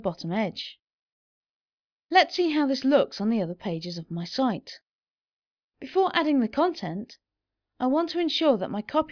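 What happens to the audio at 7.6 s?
Nothing goes wrong at 7.6 s; the audio runs through that moment without any dropout, click, distortion or other fault.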